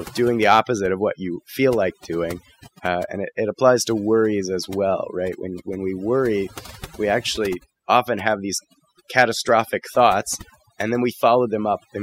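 Throughout the speech, the background drops to near silence dotted with twinkling specks: overdone noise removal, muting bands near the noise estimate.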